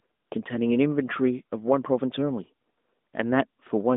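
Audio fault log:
No fault to log.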